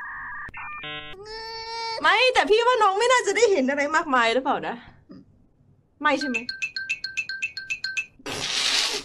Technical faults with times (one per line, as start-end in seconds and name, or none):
none